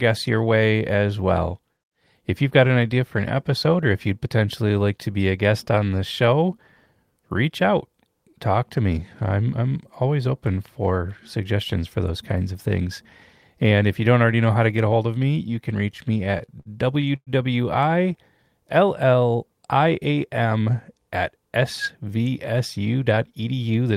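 Right after "of me you can", from 15.97 to 17.30 s, the speech hits repeated stalls (stutter): eleven jitter-buffer underruns, stretched to fill gaps up to 111 ms, so it drags and hiccups.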